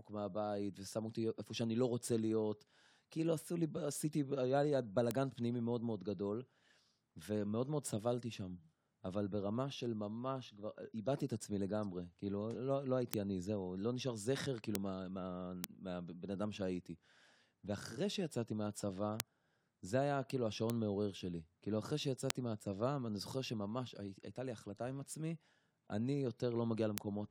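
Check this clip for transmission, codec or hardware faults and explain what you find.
Isolated bit error spikes run through this speech clip. A single flipped bit in memory or on the digital link throws one sample, or two or three adjacent ones, off by a power of two before the waveform snaps back. Each is heard as a sharp, broadband tick unrelated to the speech, peaking at about -10 dBFS, or about -16 dBFS at 5.11 and 20.70 s. They fall at 5.11, 13.14, 14.75, 15.64, 19.20, 20.70, 22.30 and 26.98 s.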